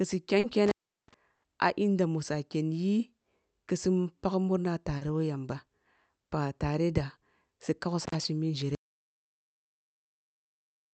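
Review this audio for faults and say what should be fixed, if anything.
Short concealed packet loss occurs twice, at 0.39–0.45 s and 4.97–5.03 s. In each, about 40 ms of the call arrived too late to be decoded, and the receiver bridged the hole by extending the preceding sound before blending back into real audio. The result is a brief smear or wobble, and a short consonant at either point may be swallowed. A larger jitter buffer, or forward error correction enabled in the Opus stream, would cover gaps of this size.

Intermittent contact shows up at 0.66–1.14 s, where the line opens for about 367 ms, and again at 8.05–8.15 s, open for about 54 ms. A loose plug or cable briefly breaks the circuit, so the sound cuts out with crackle at each edge and only faint hiss remains while the contact is open. The fix is to reseat or replace the connector and cable on the capture side.

A burst of packet loss at 1.35–1.45 s removes about 80 ms of audio. 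Several consecutive packets failed to arrive in time, and the concealment held the last sound and faded it as the gap continued, leaving a held buzz or dying hiss before playback resumes further along with the intervening material gone. Network-side work on congestion, or stronger redundancy and FEC on the Opus link, would prevent this.

An audio dropout to silence begins at 8.75 s and runs to the end of the clip. The sound stops mid-flow and what follows is digital silence with no room tone at all, so everything after that point is lost. The likely cause is that the input device disconnected or a mute was triggered while recording continued to write silence. Monitoring input level during capture, with an alert on sustained digital silence, would catch this.

The call path itself is Opus at 64 kbps with audio bandwidth limited to 8 kHz.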